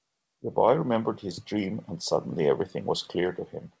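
No technical faults can be heard in this speech.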